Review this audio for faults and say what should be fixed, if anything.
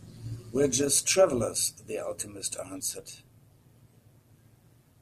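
The whole speech clip has overlap-add ripple, a metallic buzz riding on the level from start to finish. Somewhere in the processing the audio was split into windowed frames and stitched back together, but the window overlap doesn't add up to a flat gain, so the level dips and swells by about 6 dB every frame. That happens at around 150 Hz, quick enough that it reads as a metallic buzz with extra tones around the voice rather than a pulsing. To prevent it, pair the analysis and synthesis windows with a hop size that meets the constant-overlap-add condition, for example a Hann window at 50% or 75% overlap, or normalise by the summed window.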